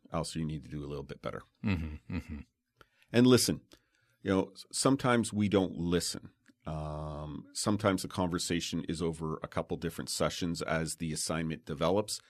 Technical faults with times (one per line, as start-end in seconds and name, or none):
none